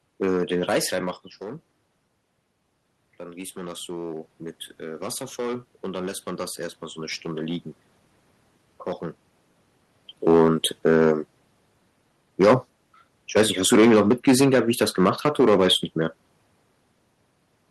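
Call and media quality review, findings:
Hard clipping, whole clip: harsh crackle and fuzz on every speech peak. Input driven about 10 dB past full scale in a converter or gain stage; a few percent of samples cut flat, adding high harmonics.

Automatic gain rising, 3.17–6.12 s: speech and room noise swell together slowly. AGC reacting to input drop of about 13 dB, raising gain about 5 dB over three seconds. Level shifts near 1 s and 10 s are talker movement.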